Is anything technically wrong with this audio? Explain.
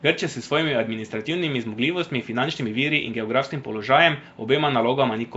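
Yes. The speech carries Nellymoser compression from start to finish. The damage is plain. There is a rough, hissy halo around the voice and a smeared, underwater quality. Nothing is heard above about 7.7 kHz. The likely cause is the old Flash microphone codec, Nellymoser Asao. It codes short blocks at a fixed, low bit budget. Weak bands get no bits and are filled with noise instead. The overall coarseness fits a rate near 32 kbps.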